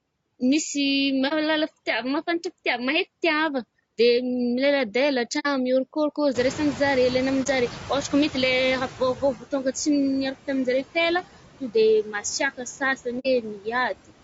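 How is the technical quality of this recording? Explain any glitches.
Technical quality is fairly poor. The speech has been processed hard by noise reduction, the codec is audibly straining, there are four short dropouts, and the suppressor clips bits of speech near the end.

Overdone noise removal runs through the whole clip. The noise reduction is set so aggressively that any frequency band sitting near its idea of the noise gets pushed almost to nothing, and the quieter parts of the voice go down with it. The gaps fall to near silence with little twinkly specks in them, and the voice comes across thin and a bit watery.

Noise suppressor artifacts are tied up with that and also last the whole way through. The suppressor works frame by frame, cutting whatever it thinks is steady noise, here by about 17 dB. So the background sinks between phrases and swells back up underneath the speech. 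What survives of it warbles and flutters instead of sounding like a smooth hiss.

Low-delay AAC compression is the likely cause of the roughness in the voice itself. It sounds grainy and a little synthetic, with noise filling in between the harmonics and a top end that doesn't sound natural. That fits AAC-ELD at a low rate of around 32 kbps. Its short frames can't resolve the pitch harmonics well and they eat bits, so the damage is plainly audible.

AAC frame loss with muting shows up four times: 1.28 to 1.33 s, 5.39 to 5.47 s, 7.43 to 7.47 s, and 13.19 to 13.27 s. Each is a brief soft hole of about 30 to 60 ms. That's one or two codec frames that went missing, with the decoder zeroing their spectrum. The overlapping windows fade the sound out and back in, so you get a soft-edged gap.

Noise suppressor catching up runs from about 6.34 to 9.36 s. The room noise jumps by about 22 dB around 6.5 s, and the suppressor's noise estimate lags behind the jump. 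So the louder background leaks through at first, cut by only about 11 dB, then gradually sinks over roughly three seconds as the estimate adapts.

Speech cut by the noise suppressor happens four times: 9.0 to 9.75 s, 12.03 to 12.4 s, 12.57 to 13.07 s, and 13.42 to 13.67 s. In each window the suppressor mistakes a short stretch of speech for noise and drops it by about 11 to 15 dB. Only a fraction of each window is hit, a tenth to a fifth of a second or so. The affected bits of speech sound swallowed or faded.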